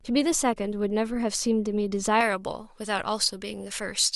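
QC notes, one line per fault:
2.21–4.16 s, pre-emphasis left on: from 2.21 s to the end the treble jumps, about 11 dB up at 10 kHz against 1 kHz. The recording boost was never undone by its matching cut. The shape points to a J.17 curve. The speech turns thin, bright and hissy.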